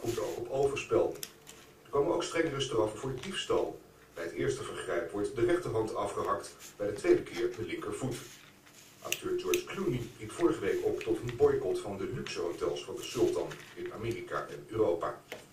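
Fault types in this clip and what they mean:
Filter restarted on every block: the filter drops its memory at each block boundary and starts cold, so every block opens with a little click. Here those clicks stack into a steady buzz at about 172 Hz, which fits a 256-sample block, running through the whole clip and rising and falling with the level.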